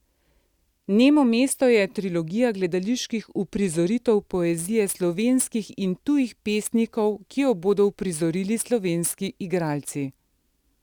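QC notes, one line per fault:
4.30 s to the end: sample clock jitter. Timing errors of a few microseconds add hiss about 25 dB down that follows loud, bright speech and vanishes in pauses, unlike steady noise.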